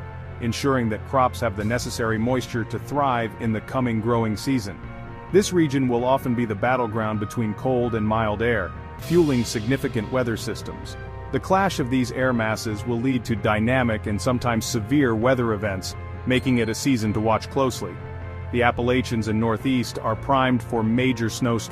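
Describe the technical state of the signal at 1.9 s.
At 1.9 s the signal is intact, with no audible dropout, distortion or other technical fault at that point.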